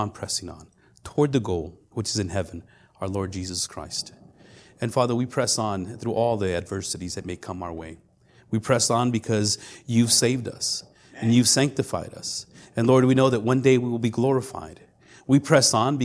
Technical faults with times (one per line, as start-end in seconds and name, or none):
none